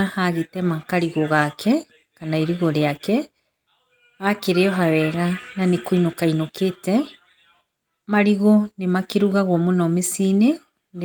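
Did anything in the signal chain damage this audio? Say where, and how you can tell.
No, nothing damaged this audio.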